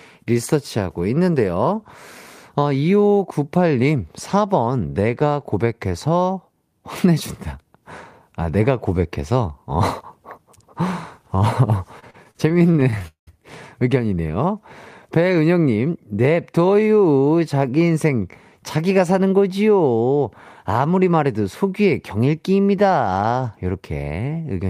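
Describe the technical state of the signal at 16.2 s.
At 16.2 s the receiver's jitter buffer is in a speed-up, running from 15.76 to 16.98 s. It had built up more audio than its target, as happens when delayed packets land together, so it cut out short stretches of one or a few pitch periods over and over, about a tenth of a second in total. The speech plays at 109% speed with its pitch unchanged, so it sounds hurried through that span.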